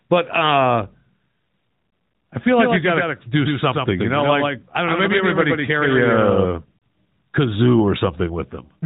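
From 2.55 s to 6.45 s, just after "I feel", a doubled audio track appears: a full-band copy trailing by about 150 ms, roughly 5 dB down, starting and stopping abruptly, likely from a second, slower capture path. At 6.78 s, about 40 ms of lost AMR speech frames cause a brief smeared dip as the decoder repeats its last good parameters with falling gain.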